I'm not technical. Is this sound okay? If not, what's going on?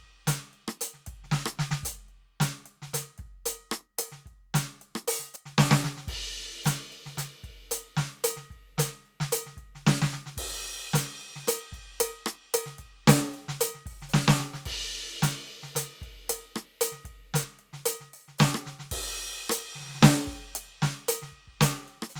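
No. The music jumps ahead three times, at 1.26, 5.36 and 17.44 seconds. Each jump comes with no gap or silence. A tiny slice of the music is simply missing. About a fiftieth of a second goes at 1.26 and 17.44 seconds, and roughly twice that at 5.36 seconds. This is likely a dropped buffer (overrun): the recording software fell behind, and a chunk of sound was overwritten before it could be saved.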